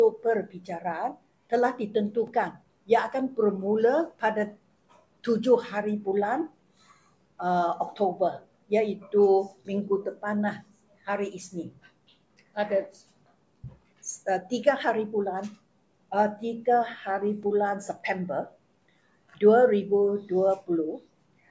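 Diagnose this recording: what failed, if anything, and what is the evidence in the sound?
Nothing in the signal chain has failed that can be heard in this recording.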